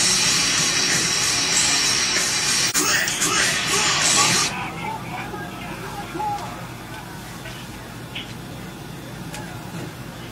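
At 2.67 to 2.76 s, AAC frame loss with muting: roughly 43 ms, fitting a single zeroed frame, fades out and back, showing as a soft-edged full-band spectrogram gap.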